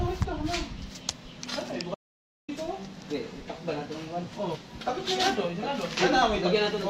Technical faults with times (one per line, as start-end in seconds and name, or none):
1.95-2.48 audio dropout to silence
4.51-4.57 damaged data in a compressed stream